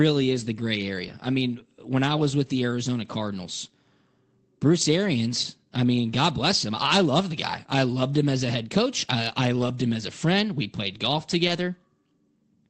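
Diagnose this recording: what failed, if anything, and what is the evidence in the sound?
Short rough, noisier patches with no gaps at 1.07–1.13, 4.81, 6.09, 8.47, 9.61 and 11.47 s: network loss, each lost packet rebuilt from error correction using a low-bitrate Opus copy.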